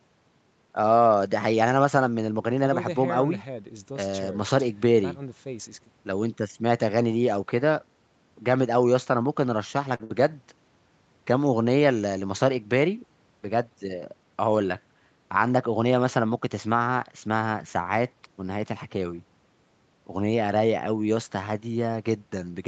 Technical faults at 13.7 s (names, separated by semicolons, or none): jitter buffer speed-up